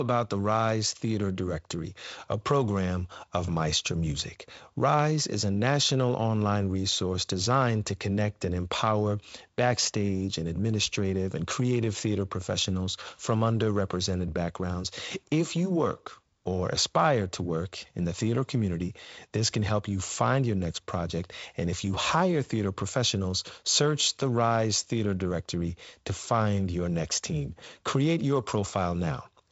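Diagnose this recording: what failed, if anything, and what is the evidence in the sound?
Nothing failed: the speech carries the normal marks of G.722 wideband telephone coding, with content ending near 7.7 kHz and the light coding texture expected at what sounds like 48 kbit/s, and the sound gives no evidence of any failure.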